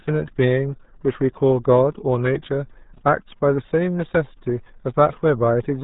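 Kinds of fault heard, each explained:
RealAudio 14.4 codec: The speech has passed through RealAudio 1, a low-rate codec built for dial-up links, and the damage is heavy. The sound is muffled and gargly throughout, with nothing surviving above 3.8 kHz, consistent with an 8 kbit/s stream. On a spectrogram the energy stops at a hard ceiling near 3.8 kHz for the whole clip, with smeared, blotchy harmonics below it. The waveform looks coarse and lacks the crisp transient edges of consonants.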